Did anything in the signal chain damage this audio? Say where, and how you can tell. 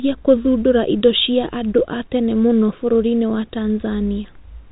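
No, nothing damaged this audio.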